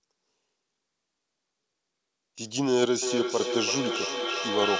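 Speech, heard through a call path with nothing above 8 kHz. From 3.02 s to the end, feedback echo between two devices appears. Words return about every third of a second, thinning, peaking about 3 dB below the speech. A second device replays the call into the microphone.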